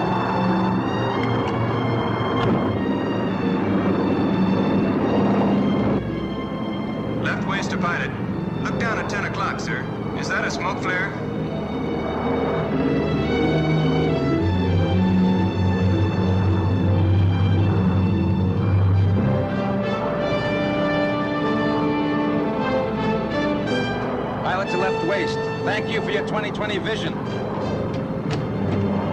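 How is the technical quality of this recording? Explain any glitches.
No glitches can be heard anywhere in this recording. Its technical quality holds steady throughout, with nothing that interrupts or alters the sound.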